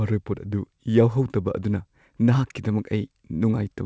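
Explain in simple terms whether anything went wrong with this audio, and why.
Nothing went wrong with this speech recording. It passed through a call connection using the G.722 codec, which is why there is no sound above 8 kHz, leaving the very top sparkle missing.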